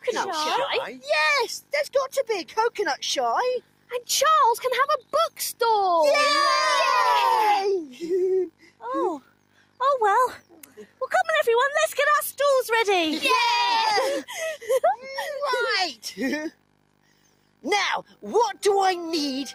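A speech-tuned noise suppressor has been left running over the whole track, so you hear a constant pumping and thinning as held material and tails get treated as noise and pulled down a few decibels while attacks slip through. On top of that there are six spots where the suppressor cuts the sound by about 12 dB: 3.61–3.91 s, 8.52–8.82 s, 9.21–9.79 s, 10.39–11.01 s, 16.51–17.64 s and 18.04–18.23 s. Sustained or decaying parts sink or get chopped short there.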